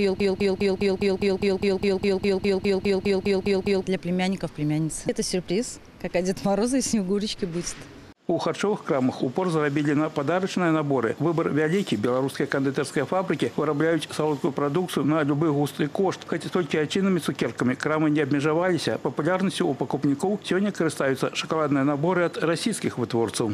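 Under way from the start until 3.84 s, a broken-record loop replays one identical 204 ms fragment, likely a stalled stream; unlike echo, nothing fades.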